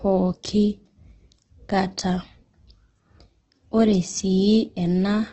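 From start to end, the speech is rough and grainy, and nothing sounds above 8.2 kHz. This is likely Opus compression in its music mode. Starved of bits, it fills bands with noise or folded copies. The heavy damage fits a bitrate around 12 kbps.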